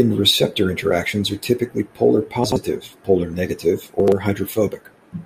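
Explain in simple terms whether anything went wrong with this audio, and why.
Twice the speech briefly jumbles, at 2.44 to 2.56 s and again at 4.00 to 4.12 s. Both are chunks out of order. The audio is carried in short 40 ms pieces, and at each spot one piece arrived two pieces late, so it plays after the two that should follow it. No sound is lost, but the order within that 120 ms stretch is scrambled, leaving three abrupt joins between misplaced pieces.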